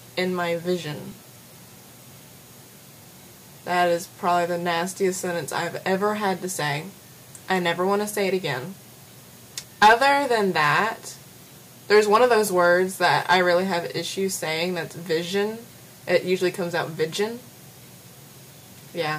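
At 1.12 s new audio failed to reach the output in time, so the device played its last block again, a repeated buffer about 2.9 ms long, which fits a 128-sample buffer. That single extra play is heard as a tiny click rather than a stutter, with essentially nothing lost.

Later, the signal three times exceeds what a stage in the chain can pass, and hard clipping flattens its peaks: from 9.82 to 10.08 s overdriven by about 8 dB, from 11.93 to 12.67 s by about 4 dB, and from 13.04 to 13.36 s by about 5 dB. The squared-off tops add high harmonics, heard as a harsh, crackling fuzz on the loud moments, strongest in the first stretch.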